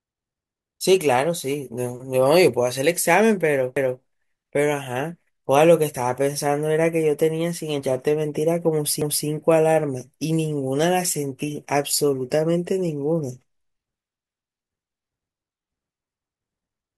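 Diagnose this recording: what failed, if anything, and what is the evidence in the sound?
Overlapping chunks at the buffer stage: the speech was processed in 5 s blocks, each starting 250 ms before the previous one finished. That quarter-second of audio is played twice at each join, so it stutters from 3.77 to 4.02 s and again from 9.02 to 9.27 s.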